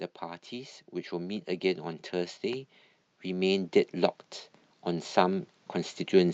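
Automatic gain rising from 0.19 to 1.53 s and again from 2.11 s to the end: the gain control, hearing quiet input, lifts speech and background together, first by about 3 dB. The call codec's top end stops near 8 kHz.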